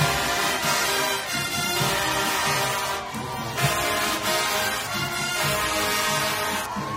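No technical faults can be heard anywhere in this audio.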